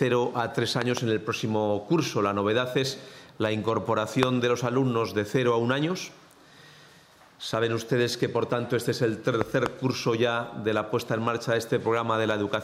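Loud pops interrupt the sound at 0.82 to 0.99 s (a double pop, about 15 dB above the signal), 4.23 to 4.25 s (one sharp pop, about 25 dB up) and 9.41 to 9.68 s (another pair, about 20 dB up). Each is likely a voltage spike from a plug, switch or static, added over the sound, which continues underneath.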